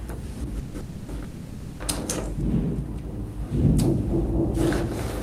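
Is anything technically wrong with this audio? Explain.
Yes, three call audio freezes: 0.59–0.76 s, 0.80–1.10 s and 1.24–1.82 s. Each stretches the last sound into a fading buzz or hiss, likely from packets stalling and draining the jitter buffer, then resumes where it left off, adding 150, 280 and 560 ms of delay without losing anything.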